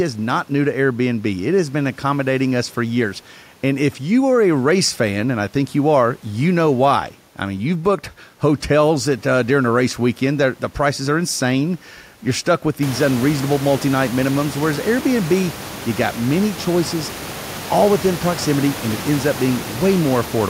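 No technical faults are present.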